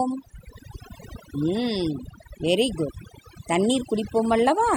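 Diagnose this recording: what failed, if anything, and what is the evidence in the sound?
Overdone noise removal runs through the whole speech clip, a fault at the call-processing stage. Between phrases the background drops and breaks up into twinkling, warbling specks. The suppressor was set too aggressively: it pulled individual frequency bands far down or out whenever they sat close to its noise estimate, taking the quieter parts of the voice along with the noise.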